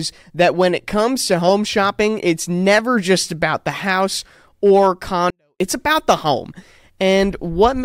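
At 5.30 s, right after "about the house or", the speech drops to near silence for 0.3 s, returning at 5.60 s before "it's about the home". This is a 24-bit alignment error (too quiet): 24-bit samples sitting in the low bytes of 32-bit words were read as full 32-bit integers, cutting the level by about 48 dB without distorting it. The waveform shows a sudden flat sliver, and the spectrogram a faint but intact band.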